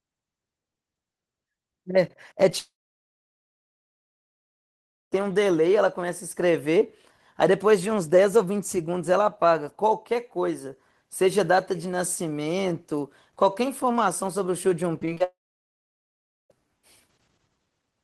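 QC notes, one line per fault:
2.49–2.53 s, short concealed packet loss: about 20 ms failed to arrive and the receiver patched it by extending the preceding sound, then crossfaded back. It heard as a brief smear or wobble. On a spectrogram it shows as a narrow smudged column where the harmonics blur.
2.59–5.14 s, long network dropout: the sound stops, a short fading buzz or hiss continues the last fragment, then roughly 2.4 s of silence follows before the audio resumes with that section missing, likely from a network outage. The waveform shows a brief decaying tail and then a flat line. The spectrogram goes blank.
15.00–15.22 s, repeated packet loss (robotic sound): four gaps, none longer than 20 ms, were each filled by repeating the last sound, so about a third of the span is synthetic. This gives a choppy quality. The spectrogram shows periodic smeared columns with stuttering, overly regular harmonics.
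15.24–16.52 s, long network dropout: a second outage, likely on the network path, begins right after the choppy stretch. A short fading continuation gives way to about 1.15 s of near silence, and the audio then picks up with the middle lost. The waveform flattens and the spectrogram empties across the gap.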